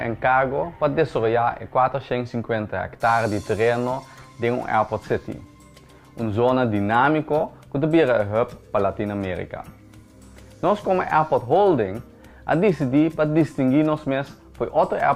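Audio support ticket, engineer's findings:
No defects found on listening; signal path intact, nothing to escalate.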